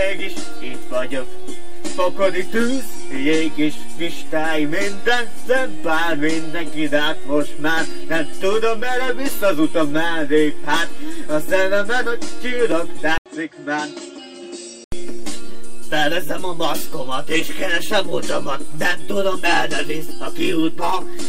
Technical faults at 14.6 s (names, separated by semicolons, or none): input switched to a poorer device